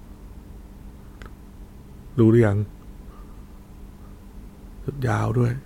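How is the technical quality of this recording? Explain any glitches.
No audible glitches or faults.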